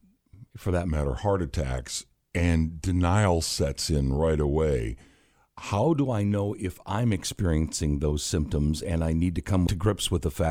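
From 0.88 to 5.84 s, after "for that", a wrong sample rate slows speech to 0.92 speed and lowers pitch 1.5 semitones; spectrogram harmonics sit lower, stretched wider.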